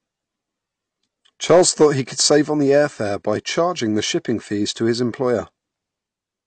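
From the start, the whole recording sounds dull and smeared, with nothing above 8.6 kHz and a warbling, fizzy edge on sustained sounds and sibilants. This is most likely AAC compression, with AAC-LC run at a low bitrate that fits about 32 kbps. Unlike a plain low-pass filter, which only removes the top, this coder also starves the bands it keeps, so the spectrum has holes and the texture swirls over time.

From 1.50 to 1.86 s the signal is driven about 4 dB past what a stage can pass, and its peaks are cut flat. This hard clipping shows up as crackle on the peaks of that stretch. The flat tops add new harmonics, which sets it apart from the codec damage: codec damage loses detail everywhere, while clipping adds gritty distortion only where the level overloads.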